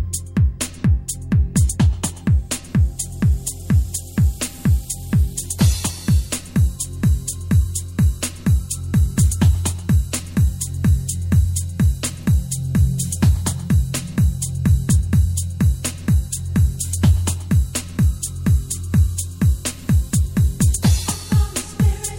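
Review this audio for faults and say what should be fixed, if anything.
Nothing stood out on listening, so there is nothing here that needs fixing.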